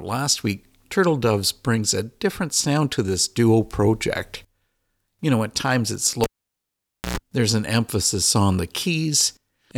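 At 6.24 s a sharp pop cuts into the speech, and the sound drops to near silence. This is a cable pulled and plugged in while live. The connection stays broken for about 0.89 s. As the plug goes back in, only the tip makes contact at first. That lets through a burst of 60 Hz mains buzz lasting about 0.11 s. A second pop follows at 7.18 s, and the speech returns.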